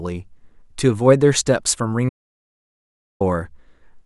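At 2.09 s the speech cuts off abruptly and does not return until 3.21 s, an audio dropout to silence lasting about 1.11 s. The gap is dead digital silence, with no room tone or noise floor, so whatever was said there is simply missing. The likely cause is a momentary loss of the input signal while recording continued. On a waveform the trace collapses to a flat line; a spectrogram shows a fully blank vertical band.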